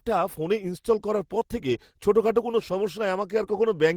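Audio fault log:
1.39–1.43 s, short concealed packet loss: after "ফোনে ইনস্টল করার পর", about 20 ms of audio never arrived and roughly 13 ms was synthesised from the preceding sound. This leaves a brief smear rather than the silent hole of a plain dropout.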